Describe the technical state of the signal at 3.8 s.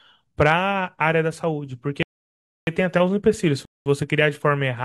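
At 3.8 s the speech is silent, inside a rebuffering stall running from 3.65 to 3.86 s. The player exhausted its downloaded audio and paused for about 0.21 s until more data arrived, then resumed at exactly the point it stopped. No audio is lost; time is only added.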